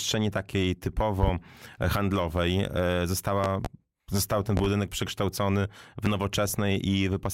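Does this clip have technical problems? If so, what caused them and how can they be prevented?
Yes. Loud pops land at 1.23–1.31, 3.44–3.68, 4.57–4.68 and 6.06–6.09 s, mostly doubled, far above the sound. A likely cause is voltage spikes from switching or static. Secure connectors and mute before switching.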